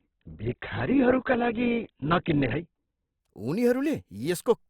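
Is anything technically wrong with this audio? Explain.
Yes. From 0 to 3.2 s, an adaptive stream starting at a low bitrate: the player began on a thin encoding, which fits roughly 8 kbit/s, so this speech has nothing above 4.3 kHz and stronger codec artefacts. At 3.2 s it jumps, with no gap, to a much fuller version.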